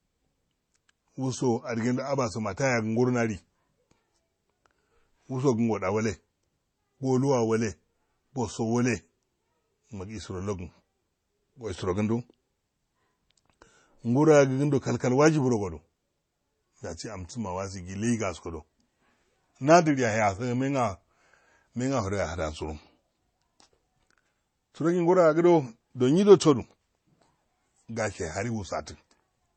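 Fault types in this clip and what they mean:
Low-bitrate audio saved at a high bitrate: the speech throughout has nothing above 20.8 kHz and carries the coarse coding artefacts of a heavily compressed source. The cause is likely an MP3 near 32 kbit/s re-encoded at about 256 kbit/s, which restores nothing lost.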